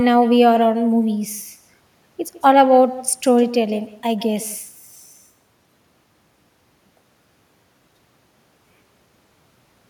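From start to finish, every phrase is shadowed by a faint, thin repeat arriving roughly 150 ms later, about 17 dB below the direct speech. This is echo with no canceller: the far end's loudspeaker feeds its microphone, and nothing removes the returned copy.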